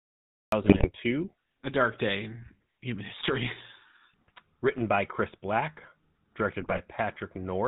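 From the first moment to the end the speech carries the GSM full-rate codec's plainly audible buzzy, gravelly roughness, consistent with the 13 kbps full-rate coder. Its pulse-driven vocal-tract model rebuilds the voice coarsely, and a spectrogram shows a hard ceiling with nothing above 4 kHz.

The clip has a cut-off start: digital silence runs until 0.52 s, where the sound jumps in already mid-utterance with no attack. The waveform shows a flat line, then signal appearing abruptly, as if recording began late.

GSM bit errors strike from 0.62 to 0.89 s and again from 6.58 to 6.80 s. Corrupted filter, pitch and gain parameters make the decoder squawk, pop and gargle. Spectrograms show smeared, misplaced formant bands, and the waveform has sudden level spikes frame by frame.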